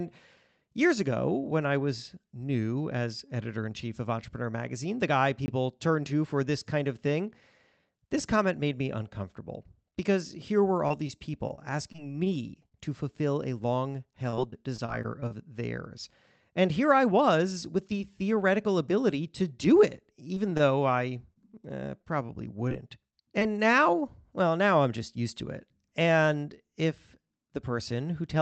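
At 5.46 s a 20 ms block of digital silence drops in: the signal cuts to silence and back with no fade.

From 10.88 to 13.20 s, repeated packet loss produces robotic sound. Short holes up to 31 ms recur, each patched by extending the previous sound, so the speech turns choppy.

After "a long", the same repeated packet loss returns from 14.30 to 15.32 s. It is denser here, with about 16% of the span concealed and gaps up to 26 ms.

Between "here I" and "the theoretical ability to", from 17.18 to 17.86 s, a jitter buffer speed-up trims pitch-period slices totalling some 40 ms. The speech runs at 105% speed with the pitch unchanged and sounds slightly hurried.

From 20.35 to 23.43 s, just before "now well now", there are scattered short gaps: roughly ten isolated holes of up to about 30 ms, each concealed. They are heard as brief ticks and smears within the Opus call path's 8 kHz bandwidth.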